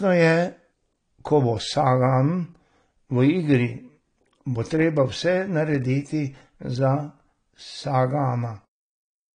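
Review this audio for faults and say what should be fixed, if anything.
The speech was likely passed through AAC compression at too low a bitrate for the material, which fits an AAC-LC encode around 32 kbps. Throughout, nothing remains above 9.8 kHz, so it sounds dull, and coarse quantisation smears sibilants into a fizzy, warbling texture. Encode at a higher bitrate, or keep a lossless master and compress only the delivery copy.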